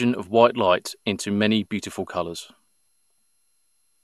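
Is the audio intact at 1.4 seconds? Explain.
No. At 1.4 s, as across the whole clip, generation loss leaves the speech swirly, hollow and smeared, with nothing above 12.6 kHz. This is likely from about ten MP2 re-encodes, each re-quantising afresh.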